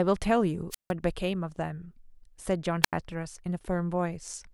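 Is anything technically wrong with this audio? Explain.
Yes. Wireless microphone squelch dropouts occur at 0.70 to 0.92 s and 2.83 to 2.93 s. The analogue FM link fades until the receiver's squelch mutes the output, leaving holes of near silence of about 157 ms and 82 ms, each preceded by a brief rise of hiss.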